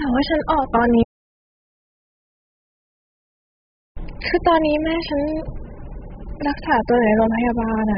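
Heavy low-bitrate encoding, likely AAC compression at a rate as low as 8 kbps, strips the spectrum from the start. Nothing survives above 5 kHz, so the speech sounds dull and smeared, with a warbling, fizzy texture on sibilants and sustained sounds.

At 1.03 s the input was lost, most likely through a disconnected or muted source, while the recorder kept writing silence. The audio dropout to silence lasts until 3.97 s, about 2.94 s of silence with no room tone.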